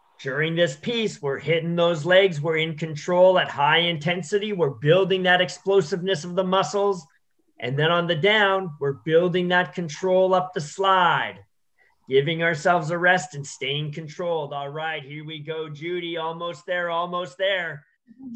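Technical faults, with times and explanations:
13.65–14.59 s, zipper noise: the level drops by roughly 10 dB in coarse steps, at around twenty a second, with no smoothing between them. Each sudden gain jump puts a small click into the waveform, so a fast ticking rides on the sound throughout the drop.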